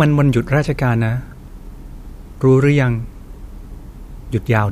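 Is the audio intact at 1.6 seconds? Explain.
Yes, the audio is intact at 1.6 seconds, with no fault at that moment.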